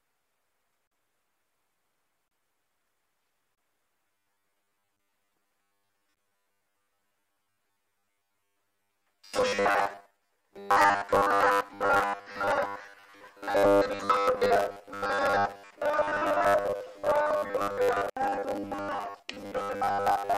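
From 4.08 s to the end, the sound turns into a robotic sound from repeated short buffers. It becomes a rigid, metallic buzz near 100 Hz. The likely cause is audio arriving too seldom, so a 10 ms chunk repeats, replacing most of the real signal.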